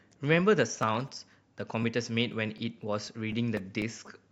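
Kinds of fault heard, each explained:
Periodic USB or driver dropouts: a background task stalls the USB bus or audio driver every 0.25 s, so about a millisecond of speech is skipped each time, leaving roughly fifteen evenly spaced ticks from 0.83 s to 4.07 s, heard only while sound is present.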